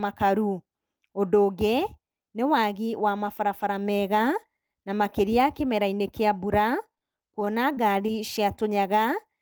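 Just after "kĩa mbura", two back-to-back short concealed packet losses run from 6.95 to 7.02 s. Roughly 20 ms of audio went missing each time, and the decoder extended the preceding sound to cover the holes, stretching the passage slightly and leaving a brief smear.

From 7.4 to 8.16 s, repeated packet loss (robotic sound) sets in. Five separate gaps, the longest 22 ms, are each patched by continuing the last sound, so about 11% of that stretch is synthesized and the sound turns choppy.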